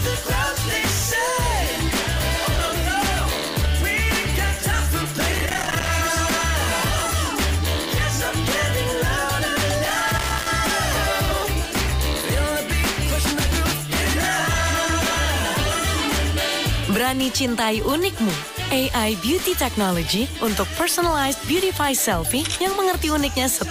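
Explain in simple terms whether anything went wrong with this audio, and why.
Loose connector crackle appears twice, from 5.32 to 5.89 s and from 9.85 to 10.49 s. A worn or dirty plug contact kept breaking, chopping the sound into scratchy bursts.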